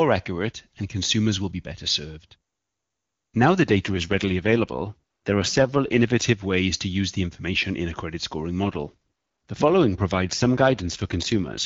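From 3.62 to 6.24 s, just before "ways to use the", and again from 8.64 s, after "in a credit scoring", to the end, an AMR rate drop roughens the wideband speech into a buzzy, synthetic texture, consistent with the codec rate falling from about 23.85 to 8.85 kbit/s. On a spectrogram the bandwidth stays unchanged with no gaps, but harmonics blur into grainy smears. The waveform stays continuous, with no dropouts.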